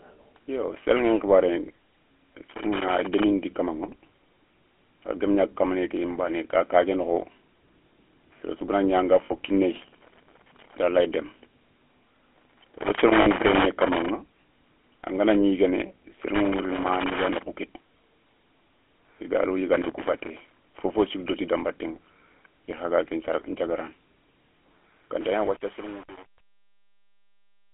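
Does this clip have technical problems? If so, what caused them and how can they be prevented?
Yes. Throughout the clip, the speech has passed through the GSM full-rate codec, which fits a 13 kbps link. It rebuilds the voice from a vocal-tract model driven by sparse pulses inside a 300 Hz to 3.4 kHz band, so the voice sounds plainly buzzy, gravelly and muffled. Sending the audio over a wideband or higher-rate codec would prevent this.

Loose connector crackle comes from a worn or dirty contact that makes and breaks as it moves. It chops the signal into irregular bursts of scratching at 2.50–3.24 s, 12.34–14.09 s, 16.35–17.43 s, and 19.73–20.67 s, the last between "i gado" and "fofo sou". Cleaning or replacing the connector and securing the cable would prevent it.

Lost GSM frames occur when the decoder receives corrupted data and repeats the last good frame's settings at falling level. 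This leaves a brief metallic ring at 9.26–9.33 s, just after "ñi anga", and at 13.22–13.27 s. Each gap lasts about 40 ms, which fits two 20 ms frames. A stronger radio link or better error protection would prevent these dropouts.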